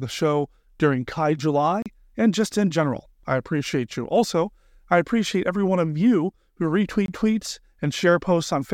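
Speech with two blocks of digital silence: 1.82 to 1.86 s (34 ms), just before "and just in general", and 7.06 to 7.08 s (23 ms), after "one of you who", which fits a 1024-sample buffer going unfilled. Unlike a faded dropout, the sound snaps to silence and back with no fade.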